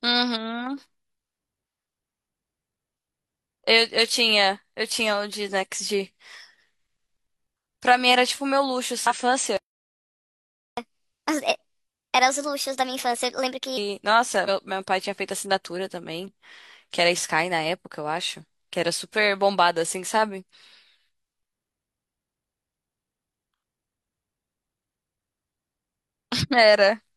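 At 9.07 to 9.14 s the speech is broken by a short burst of garbled sound. This is damaged data in a compressed stream: corrupted bytes make the decoder misread its frames, lose sync and hunt for the next valid header, so the output garbles briefly. On a spectrogram it appears as a narrow vertical smear of broadband or oddly banded energy that breaks the harmonic stripes of the voice, with a small discontinuity in the waveform where decoding resumes.

From 9.57 to 10.77 s the speech stops dead for about 1.2 s. This playback stall is likely the player running out of buffered data or having its thread blocked, so nothing reached the output until it recovered. The waveform drops abruptly to a flat line mid-utterance and picks up just as abruptly. On a spectrogram it is a clean empty column across all frequencies.

From 10.77 to 13.77 s comes catch-up at higher speed. To recover the lost time, the player resamples its backlog at 1.25 times normal rate, so the speech is both hurried and raised about four semitones, giving a chipmunk-like quality. 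On a spectrogram the harmonics sit visibly higher and more widely spaced, and syllable patterns are compressed in time.

At 14.44 to 14.49 s there is a second, briefer blip from damaged data in the compressed stream. It is the same loss of decoder sync, heard as a 50 ms disturbance, and it shows as another thin vertical smear in the spectrogram and a small waveform discontinuity.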